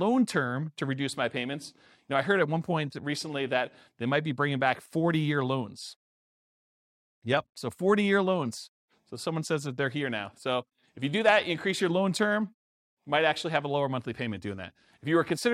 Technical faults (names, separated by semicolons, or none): none